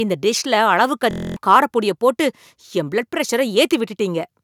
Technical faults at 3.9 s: none

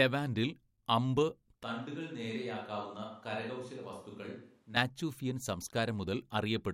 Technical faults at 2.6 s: switch to a distant microphone

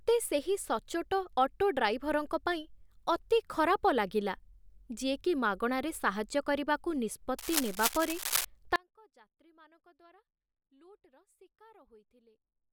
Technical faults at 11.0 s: audio dropout to a faint residue

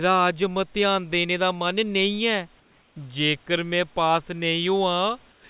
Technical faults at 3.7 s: none

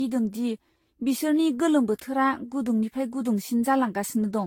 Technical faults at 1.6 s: generation loss

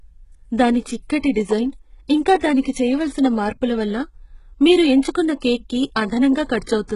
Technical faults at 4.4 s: HE-AAC compression

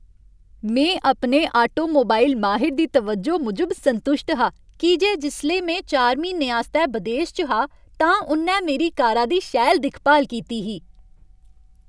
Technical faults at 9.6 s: none

